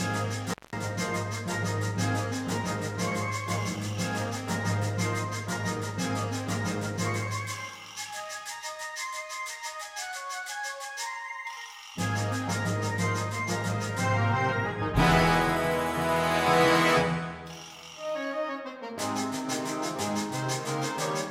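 Right near the start there's an intermittent contact fault: between 0.50 and 0.77 s the sound drops out for about 190 ms, with crackle at both edges and just faint hiss in the gap, like a loose cable or plug briefly opening the line.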